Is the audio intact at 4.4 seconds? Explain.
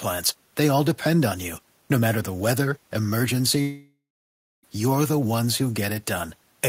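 No. At 4.4 s you're inside what's most likely a long network dropout running from about 3.61 to 4.65 s. Roughly a second of audio never arrived. The receiver stretched the last sound into a fading buzz or hiss, and for the final 0.63 s or so of the gap there's just quiet; the room noise, about 42 dB under the speech, is part of the recording, not the gap. The audio picks up again at "you're the ones", with that stretch simply gone.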